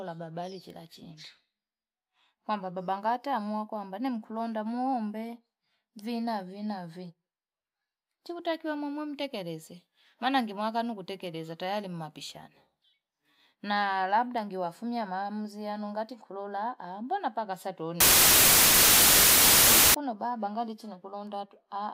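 Samples written at one width are read back at another, which fits 32-bit data being read as 16-bit, producing a wrong sample width fault from 18.00 to 19.94 s, between "nkulola mbona paka sato" and "baba mbangali chinakulonda". Mismatched byte pairs turn into loud noise, with the speech buried and slowed to half speed.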